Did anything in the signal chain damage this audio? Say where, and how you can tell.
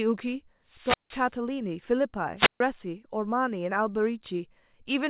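Yes. The analogue FM wireless microphone link faded twice, and each time the receiver's squelch muted the output: a wireless microphone squelch dropout. From 0.66 to 1.33 s, hiss rises, then a hole of near silence lasts 166 ms before the speech returns. The same thing happens from 2.37 to 2.60 s, with a 142 ms hole. Throughout, the audio stops at 4 kHz, which fits a G.711 call codec downstream.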